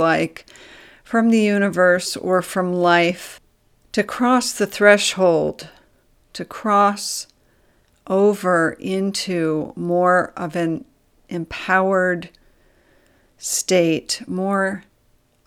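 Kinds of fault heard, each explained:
No technical faults heard.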